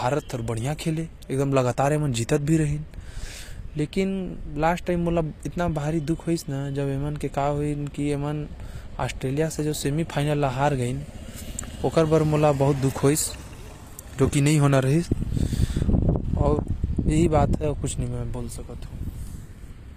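From start to finish the treble of the speech sounds bright but synthetic, with s sounds turning gritty and lispy and nothing above 14.9 kHz. This is likely HE-AAC compression, which fits a low bitrate around 24 kbps, where spectral band replication rebuilds the upper bands from copied lower ones.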